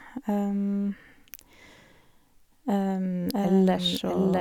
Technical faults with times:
3.32-4.41 doubled audio track

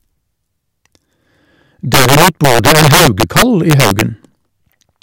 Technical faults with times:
1.94-4.01 integer overflow

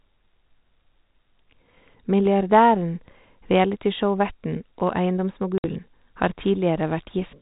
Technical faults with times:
5.58-5.66 packet loss on an ADPCM call

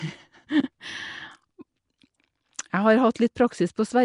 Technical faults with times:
0.00-4.04 Nellymoser compression

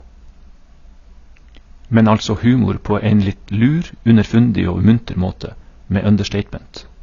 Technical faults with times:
0.00-7.03 low-bitrate audio saved at a high bitrate

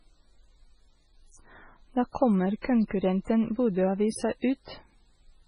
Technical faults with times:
0.00-5.47 MP3 compression

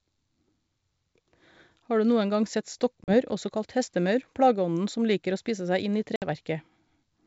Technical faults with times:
3.04-3.14 packet loss on an ADPCM call
6.16-6.24 packet loss on an ADPCM call

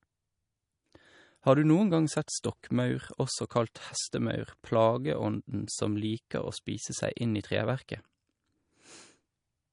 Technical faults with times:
0.00-9.73 MP3 compression

